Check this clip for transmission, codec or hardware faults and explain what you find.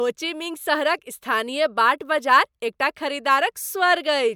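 No faults are audible here.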